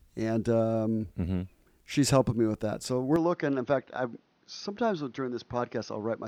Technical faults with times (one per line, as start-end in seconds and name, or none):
3.16-6.28 input switched to a poorer device